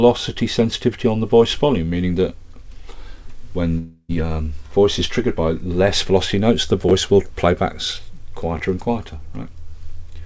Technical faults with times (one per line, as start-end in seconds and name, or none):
3.78-4.11 long network dropout
6.89-6.91 chunks out of order
8.57-8.59 chunks out of order